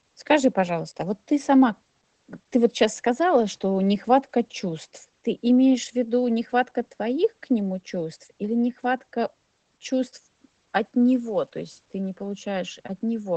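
From start to finish the speech carries Opus voice compression, the SILK mode at a low rate, which fits about 12 kbps. Nothing survives above 8.4 kHz, so it's muffled, and the coarsely coded excitation gives voices a plainly audible hoarse, slightly robotic edge.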